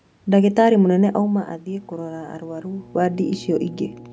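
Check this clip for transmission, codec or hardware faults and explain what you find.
One hardware fault is present: mains hum. From 1.68 s to the end of the speech, a steady 60 Hz tone sits roughly 20 dB below the voice, as a ground loop or nearby transformer leaks the power line into the signal. Unlike broadband room noise, it is a fixed, pitched drone that holds a constant level as the talker shifts.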